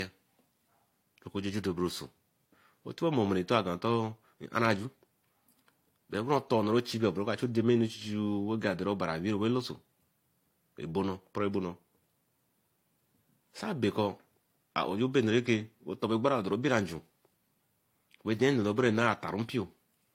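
Speech with stacked artefacts throughout and nothing above 16.3 kHz, likely from transcoding between lossy codecs, consistent with low-rate HE-AAC re-encoded to AAC-LC.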